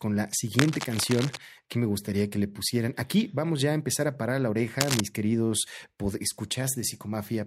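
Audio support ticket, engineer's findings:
Cable scratch noise, 0.59–1.38 s and 4.80–5.00 s. Dense, uneven scratching bursts over the speech, a little below speech level in the first span and about as loud in the second. Likely a worn cable or connector moved, contact resistance fluctuating rapidly.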